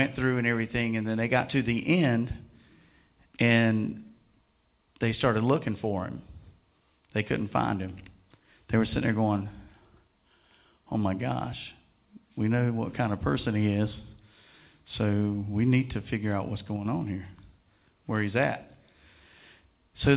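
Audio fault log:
No faults logged; the call path is audible as a band limit with nothing above 4 kHz, which fits narrowband 64 kbps A-law telephone coding.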